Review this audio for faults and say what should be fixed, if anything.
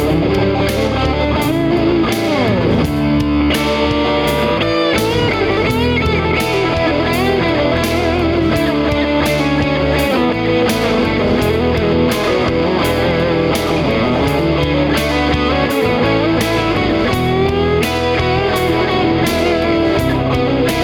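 At 10.33 s the level drops by about 5 dB in one step, sound and background noise together, and comes back at 10.50 s. That's a sudden gain jump, likely a gain setting applied without a ramp. Prevention: ramp every gain change over a few milliseconds.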